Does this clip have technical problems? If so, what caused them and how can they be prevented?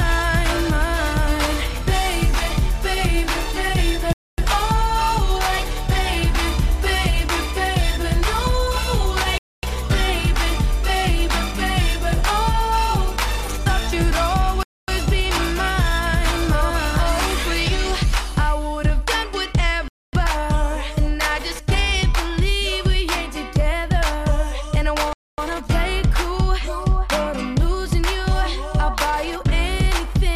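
Yes, there's a gap between chunks, heard as 250 ms holes at 4.13, 9.38, 14.63, 19.88 and 25.13 s. The audio comes in 5-second chunks with silence slipped in at each join, so nothing's lost, just interrupted. Queue chunks gaplessly and strip codec padding.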